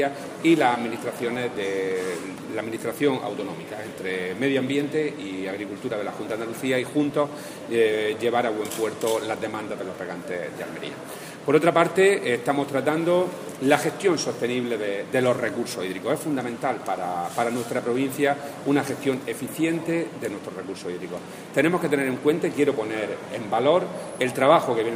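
Nothing in this one trips any alarms, since there's no fault to point to anywhere along the way.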